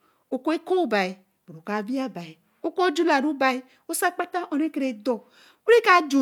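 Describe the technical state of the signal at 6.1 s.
At 6.1 s the speech signal is intact, with no dropout, click, distortion or other fault audible at that moment.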